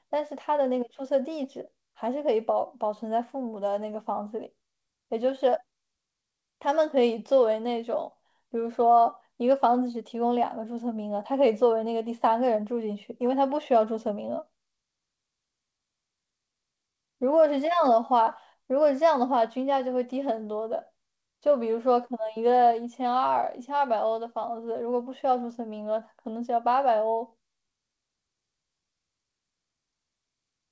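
The speech comes through a call path that is working normally, with no technical faults; its content stops at 8 kHz, which fits a wideband call codec such as G.722.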